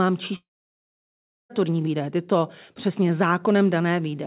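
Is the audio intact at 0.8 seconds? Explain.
No. A long network dropout runs from 0.36 to 1.52 s, so 0.8 s falls inside the gap. This is likely a loss of incoming packets: about 1.14 s of audio never arrived, and the receiver briefly stretched the last sound into a fading buzz before giving up, leaving roughly 1.06 s of near-silence. The sound resumes at "výdaje tyto přesně" with the missing stretch simply gone, still band-limited below 4 kHz by the telephone-grade call path.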